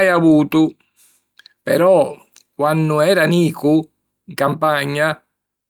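A sender clock running roughly 3% slow against the receiver's produces clock drift between sender and receiver in this speech recording. The jitter buffer keeps draining, so the receiver must pad the stream to keep playback going. That padding appears as repeated timing corrections from 0.06 to 5.23 s. Short pieces are repeated at uneven intervals, slowing delivery to 96% and adding around 200 ms overall. The result is slight hiccups and a faintly dragging, unsteady tempo.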